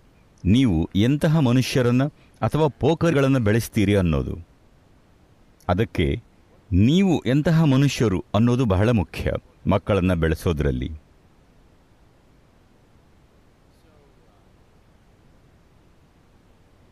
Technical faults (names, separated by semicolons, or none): damaged data in a compressed stream